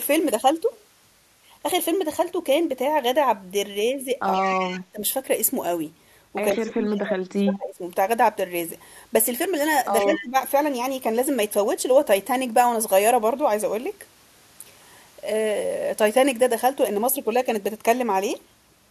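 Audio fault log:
4.34–4.75 s and 10.13–10.19 s: echo leak. A faint delayed copy of the speech trails the direct sound by 122 ms, sitting about 15 dB below it, long enough to be heard at 4.34 s but only a brief scrap at 10.13 s. This likely comes from a far-end loudspeaker whose sound reached that side's microphone and was not fully cancelled, so the residue was sent back down the line.
4.47–5.01 s, 6.51–7.82 s and 10.02–10.36 s: speech suppressed in double talk. The speech level drops sharply in pieces, by around 30 dB at its deepest in the first two spans and by around 15 dB in the last. The dips total roughly 0.4 s, 1.5 s and 0.3 s. This is likely an echo canceller meeting both talkers at once, treating the local talker as echo and attenuating it along with the echo.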